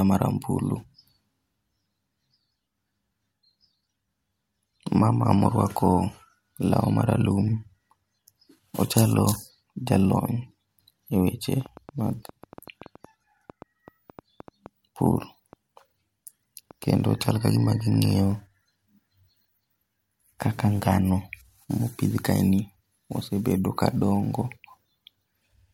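Speech carrying a train of clicks from 11.61 to 18.33 s: about thirty irregularly spaced pops, near 4.9 per second at roughly signal level, likely from interference.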